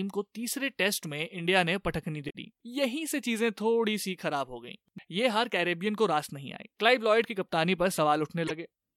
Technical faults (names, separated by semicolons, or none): damaged data in a compressed stream